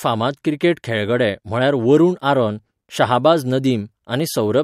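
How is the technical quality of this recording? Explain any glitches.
Listening through the recording, nothing stood out as a technical problem, so there are no glitches to explain.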